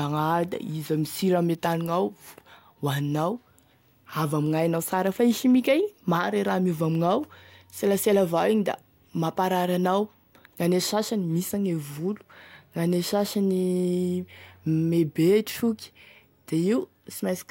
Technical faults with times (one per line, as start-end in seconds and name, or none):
0.16-17.45 clock slip clicks